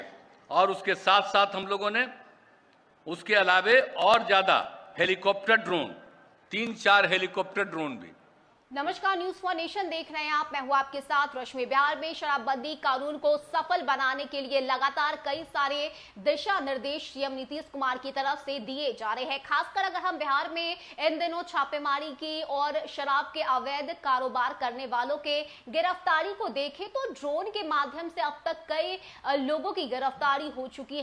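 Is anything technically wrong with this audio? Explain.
No, nothing in the signal points to a technical fault anywhere in the recording.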